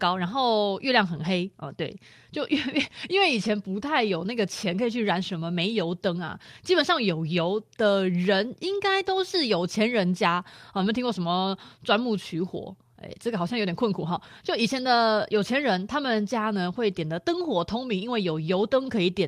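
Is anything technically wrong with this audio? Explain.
Yes. At 3.45 s and 10.77 s, lost packets were rebuilt from error correction: a low-bitrate copy in the next packet filled each 20 ms slot, so the speech has no gap but sounds briefly rougher and noisier.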